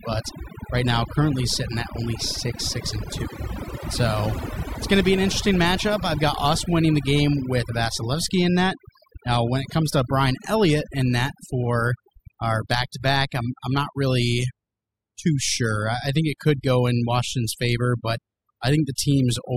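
Overdone noise removal runs through the whole recording. A noise reducer set too hard pulls individual frequency bands down or out whenever they sit near its noise estimate, so the background drops and breaks up into twinkling specks, and quieter parts of the speech vanish.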